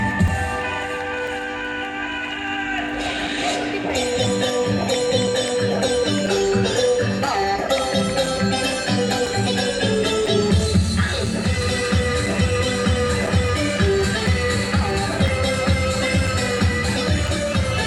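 The audio carries periodic USB or driver dropouts. A short gap appears once every second, from 0.27 s to 17.28 s. Each gap lasts only a few milliseconds and is filled with silence. Each one is heard as a small tick or pop, and it sounds only where there is signal. The steady one-second spacing points to a background task that blocks the USB bus or the audio driver on a fixed schedule.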